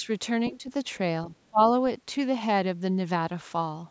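The speech briefly dips at 0.00 to 0.08 s, by only a few decibels. It sinks harder, by roughly 15 dB, from 0.49 to 0.70 s. From 1.28 to 1.60 s it dips again, falling by around 25 dB at its deepest. The likely cause is speech suppressed in double talk: with both ends talking at once, the call's echo canceller mistook this talker for loudspeaker echo and turned the voice down.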